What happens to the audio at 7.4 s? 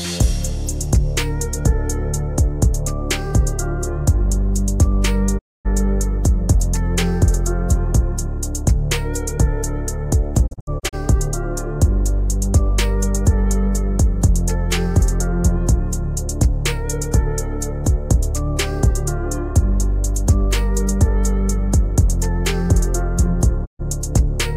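Nothing goes wrong at 7.4 s; the audio runs through that moment intact, with no dropout, click or other fault.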